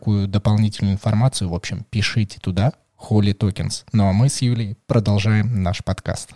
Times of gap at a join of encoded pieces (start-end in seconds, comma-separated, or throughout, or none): none